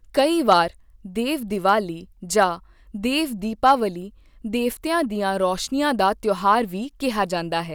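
Right at the start, from 0.19 to 0.59 s, the speech runs into hard clipping: it's pushed about 4 dB past what the stage can pass, so the peaks get sheared flat and you hear a gritty fuzz on the loud syllables. Later, from 3.66 to 3.72 s, it happens again more briefly and only about 2 dB over, so it comes across as a short crackle on a peak rather than sustained harshness.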